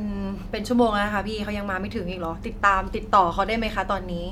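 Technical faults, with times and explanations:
No technical faults are audible anywhere in this speech recording.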